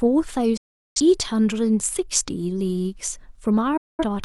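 At 0.57 s the speech drops out in a digital broadcast dropout: the receiver lost valid frames and muted, fading to silence within 8 ms. The sound returns at 1.00 s, with about 380 ms of audio lost. A second hole, losing about 210 ms of audio, runs from 3.77 to 4.04 s.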